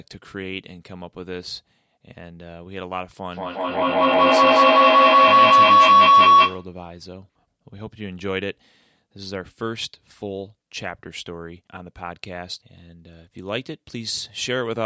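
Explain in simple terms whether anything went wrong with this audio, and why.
Yes, there's feedback howl from 3.32 to 6.78 s: two call devices nearby loop sound back, building a whistle around 1 kHz that pulses roughly five times a second, louder than the speech.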